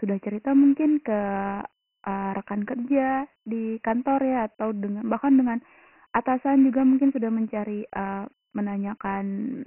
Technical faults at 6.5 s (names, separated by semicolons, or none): Dialogic VOX ADPCM